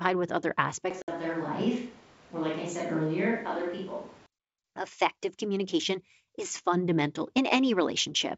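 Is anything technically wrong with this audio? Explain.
Yes, there are two faults. From 0.91 to 4.26 s the speech suddenly turns roomy and hollow, with thinner bass, a level drop of about 5 dB and room noise only about 25 dB below the speech. This is likely a switch to a distant microphone after the close one dropped out. Unlike a simple gain change, the added reverberation and noise floor show that the pickup point itself moved.

Inside that stretch, from 1.02 to 1.10 s, there is packet loss on an ADPCM call. A hole of about 60 ms, a few packets' worth, drops to hard silence. The adaptive decoder then resumes out of step with the sender, so the speech comes back with brief slight distortion before settling. That recovery is what separates it from a plain dropout.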